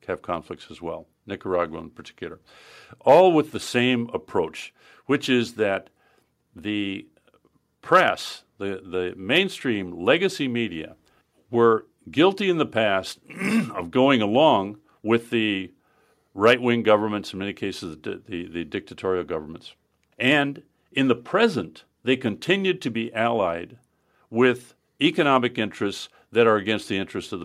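Nothing stood out on listening to this speech recording.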